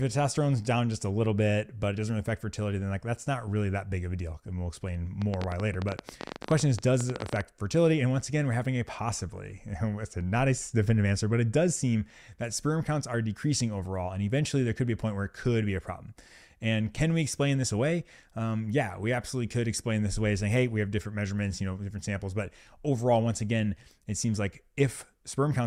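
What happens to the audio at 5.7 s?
A train of clicks runs from 5.22 to 7.42 s. About thirty sharp pops, unevenly spaced at 14.6 per second, stand well above the sound, likely from electrical interference.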